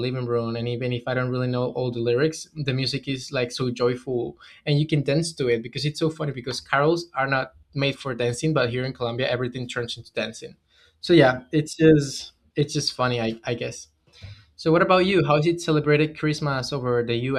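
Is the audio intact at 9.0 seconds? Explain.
Yes, at 9.0 seconds the speech plays through intact, with no dropout, click, distortion or other fault audible at that point.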